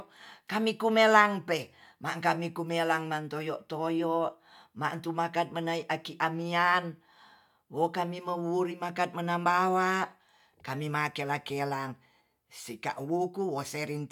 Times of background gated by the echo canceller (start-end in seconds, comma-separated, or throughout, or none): none